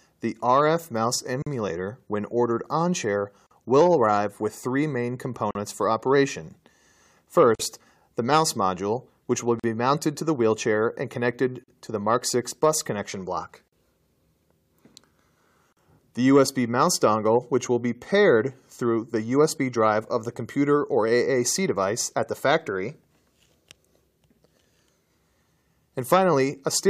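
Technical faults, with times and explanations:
1.42 to 15.77 s, gap at a join of encoded pieces: short dropouts of about 43 ms (41 ms for the first) at 1.42, 3.47, 5.51, 7.55, 9.60, 11.64, 13.68 and 15.73 s, roughly every 2 s. Each opens a gap with smeared edges in continuous sound, then it resumes where it stopped. The audio was encoded in separate pieces and joined without trimming, so each join keeps the encoder's start-up delay and final-frame padding.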